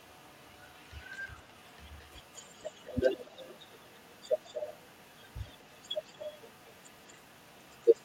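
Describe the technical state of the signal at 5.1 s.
At 5.1 s an echo leak is present, running from 0.0 to 8.04 s: a faint copy of the speech trails it by 226 ms, roughly 30 dB down. The likely cause is a far-end loudspeaker whose echo canceller let residual pickup return.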